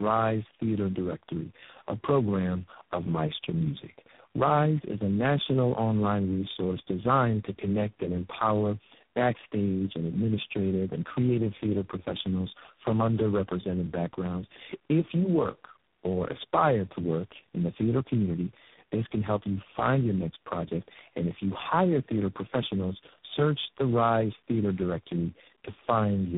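From start to end, the speech went through tandem speech coding: three speech codecs in a row, which sounds like two low-rate AMR-NB stages and then G.726, each re-coding the last one's damaged output. Nothing reaches above 3.7 kHz, leaving the speech rough, muffled and warbly.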